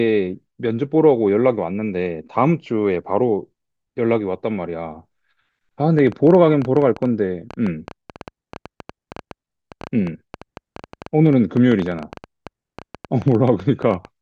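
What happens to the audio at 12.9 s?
Something, likely interference from nearby equipment or a faulty connection, keeps injecting pulses, so 12.9 s falls inside a train of clicks running from 5.99 s to 14.06 s: near-identical ticks at an uneven pace of about 8.9 per second, peaking above the speech and audible in pauses.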